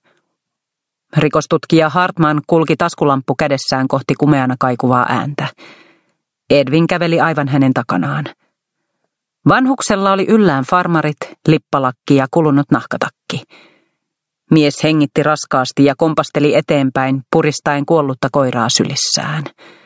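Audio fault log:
throughout, gain pumping: gain ducks about 15 dB under loud sounds, likely a fast limiter reining in excessive microphone gain.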